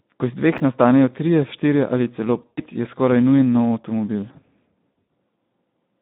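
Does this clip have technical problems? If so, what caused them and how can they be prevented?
Yes. The speech runs through a Speex codec for the whole clip. The band is confined to about 150 Hz to 3.7 kHz, and the voice sounds hoarse and noisy, which fits a low setting of about 11 kbps. The roughness is steady from start to finish, which separates it from a fault confined to one moment. Running Speex at a higher quality setting, or in wideband mode, would prevent it.

Between 0.58 and 0.60 s, just after "iz dveh" and before "nastanejo trije štirje ali", the chunks play out of order. A 10 ms chunk plays one position late, so the sound briefly jumbles at the hard joins. Nothing is missing, which distinguishes it from a dropout. Writing chunks in sequence-number order through a properly sized buffer prevents it.

From 2.41 to 2.61 s, after "trije štirje ali celo", VoIP packet loss is concealed by the speech codec. 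About 120 ms is lost across 160 ms, with a longest gap of 100 ms, which fits roughly six 20 ms frames. The decoder stretches the last sound into a fading buzzy tone or coloured noise, and the voice stays weak or distorted afterwards. This stretched sound, rather than silence or a click, is what distinguishes it from a plain gap. Adding forward error correction or a larger jitter buffer would prevent it.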